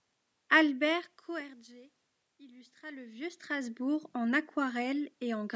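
Nothing in this speech clip counts as a technical fault: the room's background noise, the level shifts around 1 s and 3 s as the talker moves, and the call-style microphone processing with nothing above 8 kHz are all just part of how it was captured.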